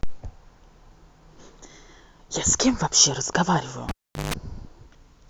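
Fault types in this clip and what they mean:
Cable pulled and plugged in: at 3.89 s the speech drops out with a sharp pop, leaving near silence for roughly 400 ms, including a burst of 50 Hz mains buzz lasting about 160 ms, before a second pop brings the sound back at 4.34 s. A live cable was yanked from its socket and pushed back in. The buzz comes from the moment only the plug tip makes contact, so the unshielded connection picks up hum until the plug seats fully.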